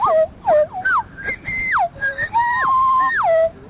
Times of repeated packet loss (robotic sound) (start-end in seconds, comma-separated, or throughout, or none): none